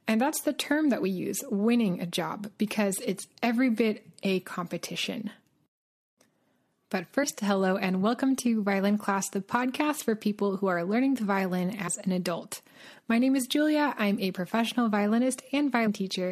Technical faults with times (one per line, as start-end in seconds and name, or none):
7.22 compressed frames skipped
11.87 compressed frames skipped
15.86 compressed frames skipped